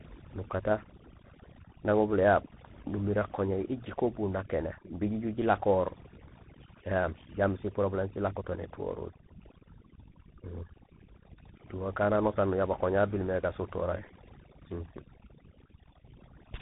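From the first second to the end, the speech carries overdone noise removal. The reduction was set too hard. Any frequency band close to the estimated noise floor gets pulled far down or shut off. Soft parts of the voice fall below that line and vanish with the noise. The background drops, broken by small twinkling specks.

Tandem speech coding runs through the whole clip as well. The call passed through two speech codecs in a row, with a plain telephone link between them. The signal was decoded and encoded again at each border. Each coder worked on the damaged output of the one before. The roughness and warble point to a GSM full rate stage followed by CVSD. Nothing reaches above 3.8 kHz. The result sounds rough, muffled and warbly.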